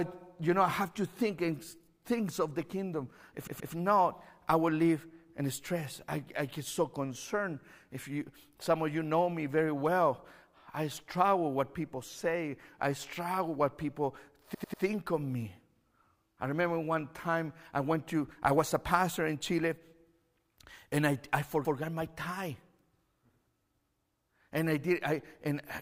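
Repeated frames stutter the speech at 3.47 s, just before "not I will live", where a 128 ms block plays twice more. At 14.54 s, between "I struggle what people" and "of me", a 96 ms block plays three extra times. At 21.65 s, after "and I I", a 128 ms block plays once more. A natural stammer varies from one attempt to the next. Here each copy is identical. Unlike a dropout, the fault adds time rather than losing it.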